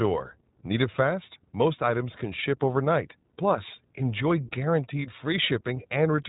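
From start to finish the speech carries iLBC codec damage, plainly audible. Nothing reaches above about 3.8 kHz, and each 20 ms frame is coded independently, which fits the 15.2 kbps mode, leaving voicing slightly rough and synthetic throughout.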